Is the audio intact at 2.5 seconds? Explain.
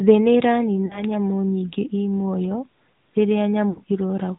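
No. At 2.5 s, as throughout, the speech sounds muffled and buzzy with nothing above 4 kHz. This is AMR narrowband mobile codec damage: sparse pulses drive a vocal-tract model, and the quality fits a mode around 10 kbps.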